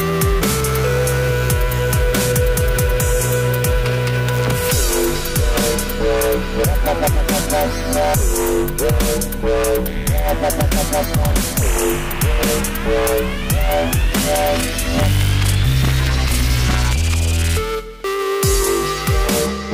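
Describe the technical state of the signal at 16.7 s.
At 16.7 s the signal is intact, with no audible dropout, distortion, noise burst or other technical fault.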